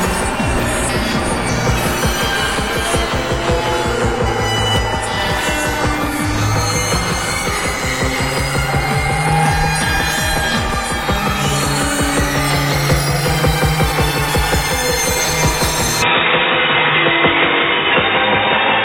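At 16.02 s the sound abruptly turns dull and boxy and stays that way to the end. Everything above 3.8 kHz vanishes, the level shifts by around 5 dB, and a new, faint background noise appears, roughly 40 dB below the sound. There is no gap at the change. This is likely an input switched to a poorer device mid-recording, a narrower-band microphone or headset path with its own tone, gain and noise floor.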